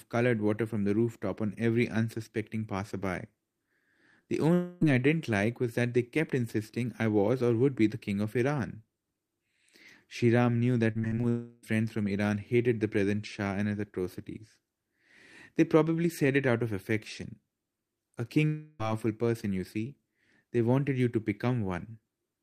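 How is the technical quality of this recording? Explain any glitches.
The speech has audible network glitches in four places.

Long network dropout: 4.53 to 4.83 s, 11.29 to 11.65 s, and 18.47 to 18.81 s. Each time, about 0.3 s of speech is replaced by a smeared continuation of the last sound. It fades but never goes silent. The cause is likely a stretch of audio that never arrived.

Repeated packet loss (robotic sound): 10.91 to 11.25 s, just before the second dropout. Five short holes, the longest 45 ms, are each patched by extending the previous sound. Nearly half this span is patched, so it sounds choppy with pieces missing.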